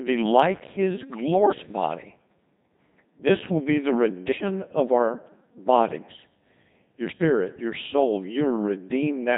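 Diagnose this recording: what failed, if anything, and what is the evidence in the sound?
The codec stage failed: the speech went through a Codec 2 vocoder, and the heavy, very low-rate character fits the 2.4 kbit/s mode. Only pitch, voicing, energy and spectral envelope survive, so the decoder rebuilds the voice from sine waves, leaving it robotic and buzzy throughout.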